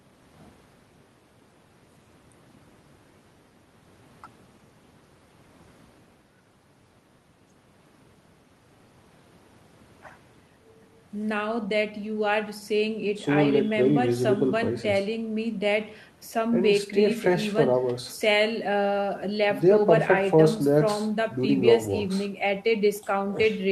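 No technical faults can be heard in this speech recording. It has passed through a WebRTC call path that is working as expected, with the spectrum ending at about 12 kHz and the usual coding texture that fits Opus at around 32 kbps.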